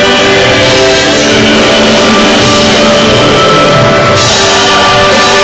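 Nothing in the audio stood out as a technical fault on listening.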